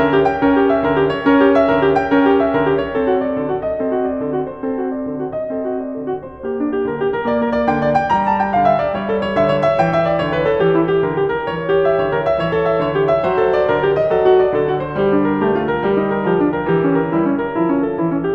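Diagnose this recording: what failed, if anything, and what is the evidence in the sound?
Nothing in this music recording stood out on listening that would point to a failure at any stage of the chain.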